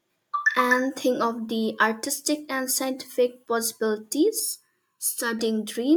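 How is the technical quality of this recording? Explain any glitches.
There's one glitch, a channel delay (comb filtering) from about 4.39 to 5.39 s. For that second, one channel runs a little under a millisecond behind the other, and when the two fold down to mono, whatever they share cancels at evenly spaced frequencies, the first notch sitting somewhere around 700 Hz and the rest stacking above it. You hear the speech go hollow and phasey, like it's been pushed through a tube, then snap back.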